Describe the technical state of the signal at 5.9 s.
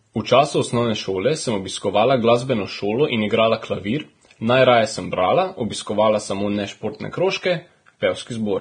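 At 5.9 s the speech carries damage that runs through the whole clip and likely comes from Vorbis compression, consistent with a rate near 23 kbps. Treble detail is coarsely quantised into hissy, grainy noise, and a spectrogram shows a hard ceiling at 9.7 kHz with speckled energy beneath it.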